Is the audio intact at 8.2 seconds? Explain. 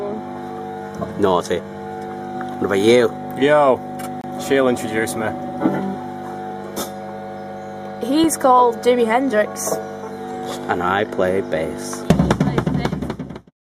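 No. At 8.24 s there is a gap between stream segments: a hole of silence about 3.1 ms long with abrupt edges, heard as a dropout in the sound. The timing fits a boundary between 4-second segments, where the time stamps of consecutive segments fail to meet and the player pads the shortfall with silence. Nothing is discarded; the gap inserts time rather than removing audio.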